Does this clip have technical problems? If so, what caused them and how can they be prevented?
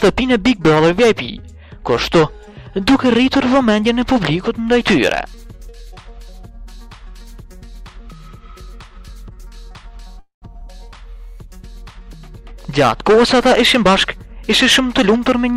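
Yes, there are two. First, a call audio freeze at 10.19 to 10.44 s: the sound stalls and is stretched into a fading buzz or hiss that trails off into about 120 ms of silence. About 225 ms is filled in, yet nothing is lost; the audio resumes exactly where it stopped, just 225 ms later. That pattern is likely packets held up in transit long enough to drain the jitter buffer dry. A steadier network path, or a slightly deeper adaptive jitter buffer, would ride out a stall like that.

Second, a jitter buffer speed-up from 13.75 s to the end at 15.56 s. The buffer is holding more than it wants, so the receiver keeps snipping out tiny pitch-period-sized slices to catch up. It ends up running at about 105% speed with no pitch shift, and roughly a tenth of a second gets trimmed in total, so that stretch sounds a bit hurried. Avoiding the packet bunching in the first place, or letting the buffer drain more gently, keeps this from being noticeable.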